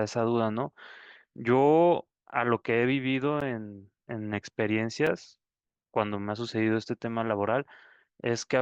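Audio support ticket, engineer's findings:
Two ticks in the speech at 3.41 s and 5.07 s. Block of digital silence, about 10 ms and 5 ms, hard cut to zero and back. Probably the output buffer not getting filled in time.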